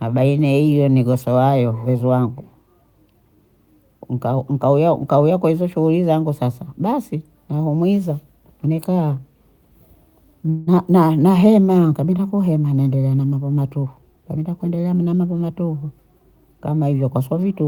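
At 10.49 s a call audio freeze begins and lasts until 10.69 s. The last sound is stretched into a fading buzz or hiss for about 176 ms, with no silence. Packets were likely held up in transit, emptying the jitter buffer. Nothing is lost. The rest simply arrives 176 ms later.

Just after "kuhema naendelea na mambo", at 13.83 s, a jitter buffer speed-up starts and runs to 15.28 s. Excess buffered audio was trimmed in tiny pitch-period slices. Roughly a fifth of a second goes. The speech runs at 113% speed, hurried but at unchanged pitch.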